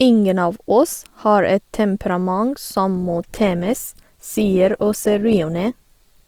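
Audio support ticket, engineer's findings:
Adaptive stream at a lower bitrate from 2.96 s to end. Sudden quality step with no gap: codec artefacts rise. Consistent with the client switching to a lower-bitrate Opus rendition, about 64 down to 16 kbit/s. Spectrogram: abrupt texture change at 2.96 s. Waveform: continuous.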